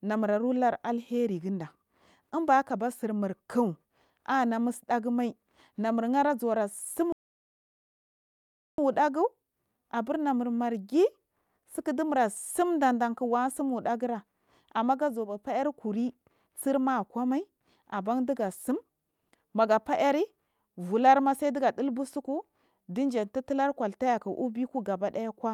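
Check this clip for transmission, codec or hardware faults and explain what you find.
Two faults stand out in this speech clip, one a gap in playback and one a stretch of degraded coding.

From 7.12 to 8.78 s there is a playback stall: the speech halts mid-flow for about 1.66 s, most likely because the player ran short of data or its thread was blocked. Unlike packet loss, the output simply goes silent until the player recovers.

From 17.44 to 20.53 s a call bitrate drop takes the encoder from 64 to 28 kbps, bottoming out for about 1.77 s. Opus codes more coarsely, so the speech turns rough or watery. Unlike loss concealment, it stays continuous, with no gaps or glitches.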